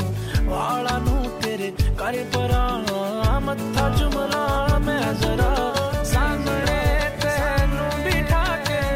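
Doubled audio track from 3.75 s to the end: a full-band copy about 5 dB quieter trails roughly a second and a half behind, likely from a second, slower capture path.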